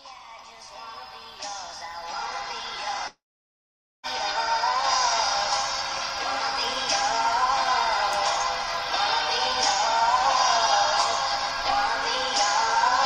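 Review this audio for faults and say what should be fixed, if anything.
Long network dropout, 3.07 to 4.06 s: the sound briefly carries on as a fading buzz, then falls to near silence for about 0.86 s before resuming past the gap. About 0.96 s of audio is gone, likely because packets stopped arriving and the receiver padded the gap. To prevent it, use a more stable connection with a larger jitter buffer or packet redundancy such as forward error correction.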